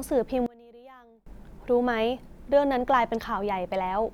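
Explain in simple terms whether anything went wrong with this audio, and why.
One stereo channel was likely flipped upside down, a fault called one channel inverted. When both sides are mixed together, the voice they share cancels itself out. From 0.46 to 1.26 s the speech drops to a faint trace.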